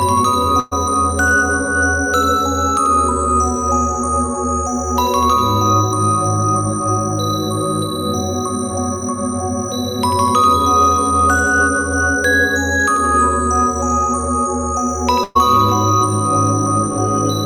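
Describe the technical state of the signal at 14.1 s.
At 14.1 s the signal is intact, with no technical fault audible at that moment.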